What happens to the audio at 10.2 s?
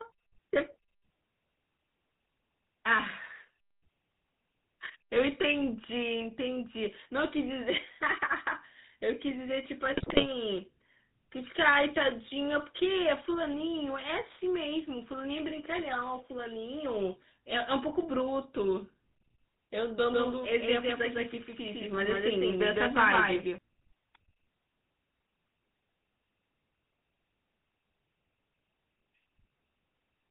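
Around 10.2 s you're in the middle of a burst of GSM bit errors, running from about 9.92 to 10.29 s. Corrupted filter, pitch and gain values garble frame after frame, so the speech squawks and gargles. Underneath, the GSM full-rate codec is at work the whole time, with a plainly audible buzzy, gravelly roughness and nothing above 4 kHz.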